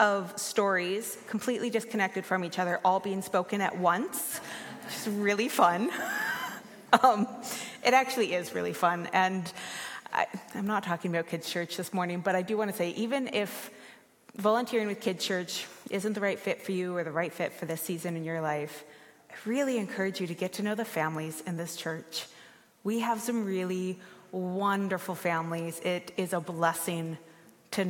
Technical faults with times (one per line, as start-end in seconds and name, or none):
none